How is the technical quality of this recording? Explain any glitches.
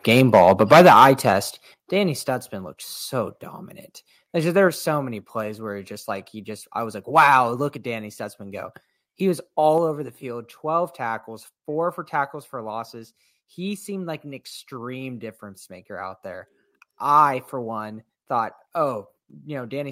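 The recording has clear level problems: the microphone overloads at the start, and the level then drops in several sudden steps.

Microphone overload, 0.09 to 1.32 s: the input was most likely set too high, driving peaks about 12 dB past the converter's limit. Their flattened tops give the loudest syllables a harsh crackle.

Microphone volume stepped down at 0.73, 1.74, 4.68 (just before "so many plays where") and 9.78 s (just before "over the field"): the call software likely reacted to the hot input by cutting the microphone's gain, about 3 dB each time except about 8 dB at 1.74 s. Speech and background drop together in one abrupt step.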